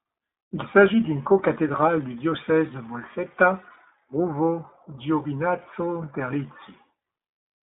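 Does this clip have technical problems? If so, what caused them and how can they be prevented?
Yes. Throughout, the speech passed through the iLBC codec, coding each 20 ms frame independently. The damage is plainly audible: a rough, synthetic edge, with nothing above 3.8 kHz. This fits iLBC's 15.2 kbps mode. To prevent it, carry the call over a wideband codec or a higher-quality link.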